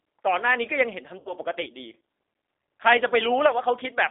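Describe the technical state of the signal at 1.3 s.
Packets were dropped and the G.729 decoder filled the gap from 1.20 to 1.33 s with VoIP packet loss concealment. It extrapolated its last pitch and filter, so about 60 ms of missing audio, consistent with three lost packets, becomes a fading buzzy or noisy smear. Throughout, the G.729 codec rebuilds the signal from a coarse vocal tract model, which fits an 8 kbit/s stream. It passes only about 300 Hz to 3.7 kHz, leaving the speech audibly rough and synthetic.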